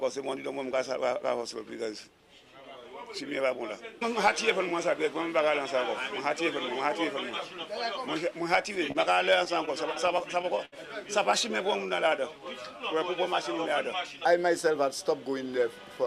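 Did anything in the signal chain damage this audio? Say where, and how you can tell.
Yes. The damage happens at the network stage, in the receiver's jitter buffer. At 8.92 to 8.97 s there is a short stall from a late packet. A sound is held for about 29 ms where it should move on. One packet came late, the buffer ran dry, and the receiver stretched the last sound until the packet arrived. Nothing is lost, but playback now runs 29 ms later.

From 9.45 to 10.74 s there are repeated stalls, a stutter. The sound catches seven times and drags. Packets kept arriving late, so the buffer emptied again and again. Each time the receiver held the last sound, 134 ms in total. The longest hold is 70 ms. About 10% of that stretch is filled-in sound. Nothing is missing.

From 11.87 to 13.00 s there is a jitter buffer slow-down. The sound runs at 96% speed at an unchanged pitch and seems drawn out. The buffer was building a reserve. 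It repeated single pitch periods and small pieces of pauses, many times over, which added 55 ms.

From 15.26 s to 16.05 s there is a jitter buffer speed-up. The sound runs at 110% speed at the same pitch and feels hurried. The buffer held more audio than it aims for, so the receiver cut short pieces of one or a few pitch periods, many times over. About 70 ms was removed to bring the delay back down.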